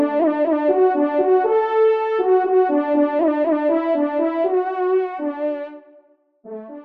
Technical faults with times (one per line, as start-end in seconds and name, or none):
none